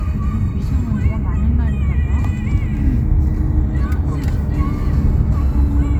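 At 2.25 s a single sharp snap lands on top of the sound. This is an electrical switching spike, likely from a nearby switch or static discharge arcing into the audio line. Unlike a dropout click, it adds a burst rather than leaving a gap.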